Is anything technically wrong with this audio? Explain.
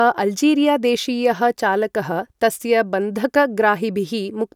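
No, nothing technically wrong stood out on listening to this speech clip.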